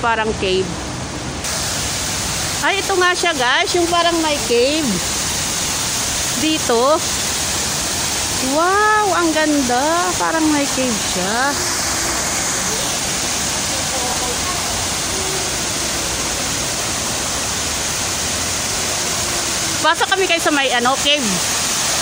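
A steady 25 Hz ticking rides on the audio throughout, a sign that the resampler restarted on every block: each 40 ms block was converted from 44.1 kHz to 48 kHz separately, leaving a small error at every block edge.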